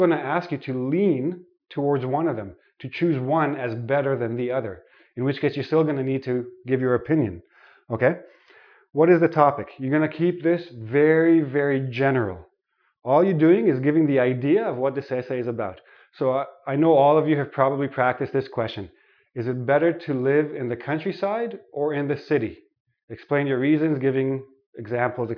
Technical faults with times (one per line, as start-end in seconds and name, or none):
none